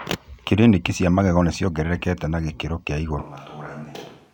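Speech that suddenly turns roomy and hollow at 3.23 s and stays that way to the end, consistent with a switch to a distant microphone, likely because the close microphone's signal dropped out. The level falls by about 10 dB and the low end thins, while room noise rises to roughly 25 dB below the speech. On the waveform the envelope steps down abruptly at that point. The spectrogram shows weaker bass, smeared reverberant tails and a brighter noise floor filling the gaps.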